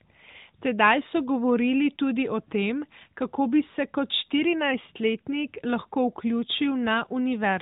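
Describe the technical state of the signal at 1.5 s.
At 1.5 s the signal is intact, carrying the narrowband band-limited character of an AMR mobile codec path, with no fault at that moment.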